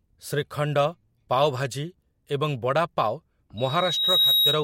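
From 3.57 s to the end, loudspeaker feedback squeal: the loop gain exceeds unity at 3.8 kHz, and that tone swells within under a second to about 5 dB above the speech.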